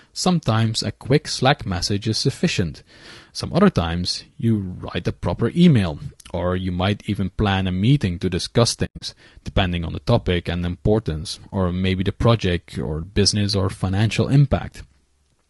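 Low-delay AAC compression runs through the whole speech clip, likely from AAC-ELD at a low rate, which fits about 32 kbps. At this low bitrate the voice sounds plainly rough and grainy, with noise filling the gaps between harmonics.

AAC frame loss with muting occurs from 8.85 to 9.02 s. The decoder zeroed the spectrum of lost frames, about 140 ms of audio spread over 160 ms, with the longest gap around a tenth of a second. Overlapping windows fade each hole in and out softly.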